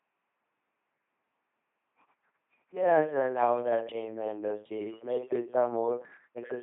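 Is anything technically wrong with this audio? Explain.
Yes. Throughout the speech, the LPC-10 vocoder replaces the natural voice with a ten-pole filter driven by either a buzz pulse train or noise. The result sounds mechanical and robotic, with wrong buzz-or-hiss voicing choices and nothing above 3.8 kHz, consistent with a 2.4 kbit/s coder.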